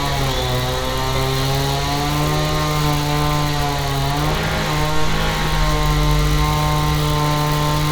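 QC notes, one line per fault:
No faults found in this recording of sounds. Nothing calls for a timed entry.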